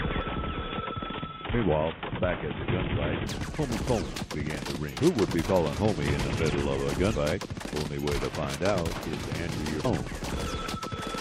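Damaged data in a compressed stream produces brief glitches at 0.99–1.01 s, 4.98–5.00 s, 7.13 s and 9.84 s, where corrupted frames make the decoder lose sync.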